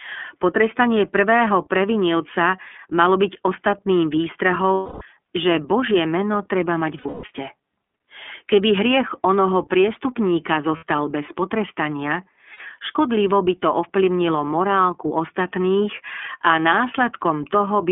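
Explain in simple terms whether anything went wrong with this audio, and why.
The speech sounds thin and phone-like throughout, plainly rough and a bit synthetic. This is the iLBC codec, an internet-calling format that squeezes audio into 30 ms chunks and keeps only a narrow band, roughly 250 Hz to 3.5 kHz, dropping the fullness and crispness.

At 4.74–5.02 s, 6.98–7.29 s, 10.76–10.83 s and 12.53–12.60 s, the sound briefly turns into a held, buzzy vowel. These are lost iLBC frames. Pieces of the stream went missing, so the decoder repeated the last bit of sound to cover the gap. The first gap lasts 270 ms. The second is patchy, with its longest stretch around 150 ms. The last two last 60 ms each. The voice recovers almost immediately after each one.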